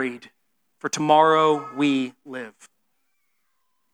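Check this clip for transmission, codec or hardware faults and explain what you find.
Two faults show up, both audible skips in the speech. At 1.0 s and 2.66 s, likely a dropped buffer (overrun) discarded about 20 ms and 40 ms of samples, leaving a jump forward.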